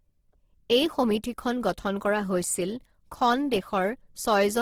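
From start to finish the speech has a rough, grainy texture, with the finer detail smeared into a hiss-like fizz rather than dropping out into swirling holes. That points to Opus compression, likely in its music-style CELT mode at a low bitrate around 16 kbps. With so few bits the encoder keeps each band's overall energy but fills in the fine structure with noise or copied content. The bandwidth still reaches about 20.3 kHz, so the damage is graininess, not muffling.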